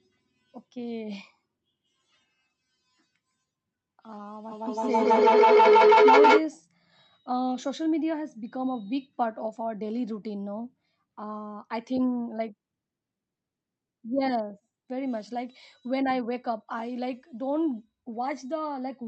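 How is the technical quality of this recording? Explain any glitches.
The speech has one clear fault, a feedback howl from 4.51 to 6.52 s. The microphone picks up a second device's loudspeaker output and each pass gains level, so a tone near 400 Hz builds, repeating roughly every 150 ms and peaking about 11 dB above the speech. The call codec limits the audio at about 8 kHz.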